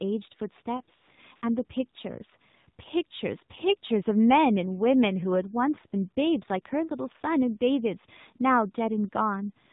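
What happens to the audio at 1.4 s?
From 1.36 s to 1.42 s the phone judged the talker silent and stopped sending speech frames for about 60 ms, so the receiver filled the gap with AMR comfort noise, synthetic noise built from a rough estimate of the background's level and spectrum. The real background drops out and a smooth, steady hiss switches in for that brief moment, then switches back out.

The whole clip, including this moment, runs through the AMR narrowband mobile codec. It samples at 8 kHz and models the vocal tract with a few excitation pulses every 5 ms, so nothing above 4 kHz survives. The damage is plainly audible: a buzzy, synthetic quality that points to a low bitrate, around 7.4 kbps, with the thin, band-limited tone of a mobile call.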